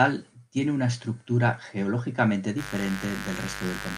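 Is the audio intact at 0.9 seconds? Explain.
Yes, at 0.9 seconds the speech plays through cleanly, with no dropout, click, distortion or other fault at that moment.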